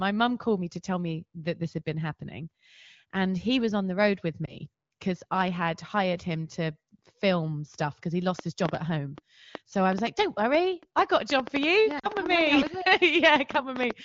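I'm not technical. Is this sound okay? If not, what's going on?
No. At 4.45 to 4.56 s, between "on the road with" and "because I had hired", the speech briefly dips and warbles, and at 11.99 to 12.10 s it drops to near silence for a moment. These are lost AMR speech frames. Radio errors spoiled small chunks of the call, one chunk the first time and two the second, and the phone filled each gap by stretching out what it had just heard.

From 8.39 s, right after "film stuff because he", to 13.92 s, a train of clicks ticks over the speech and the pauses. There are roughly 30 clicks at about six per second, unevenly spaced. They likely come from electrical interference from nearby equipment. The HD Voice call quality itself comes through clearly underneath.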